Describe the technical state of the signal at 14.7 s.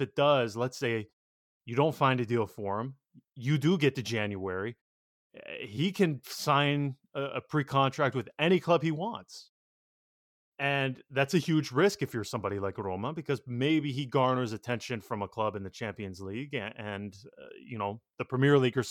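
At 14.7 s the speech signal is intact, with no dropout, distortion or other technical fault at that moment.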